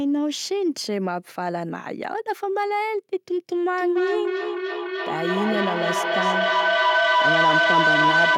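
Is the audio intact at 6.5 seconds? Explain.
No. Feedback howl runs from 3.77 s to the end at 8.38 s, so 6.5 s sits inside it. A microphone and loudspeaker are closing a loop, and each pass around it comes back louder rather than quieter. The build-up narrows onto the pitch the loop favours, a whistle near 1.5 kHz, with repeats about every third of a second and peaking at about 6 dB above the speech.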